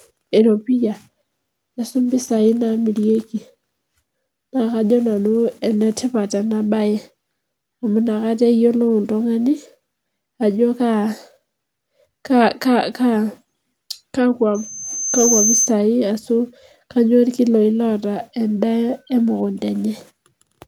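Speech clip with one clear problem: a loudspeaker feedback squeal from 14.54 to 15.74 s. The mic is hearing its own loudspeaker, and at about 6.3 kHz the loop gain goes past one, so that single tone feeds on itself. It swells over something under a second into a piercing whistle that ends up sitting roughly 5 dB above the speech before it stops.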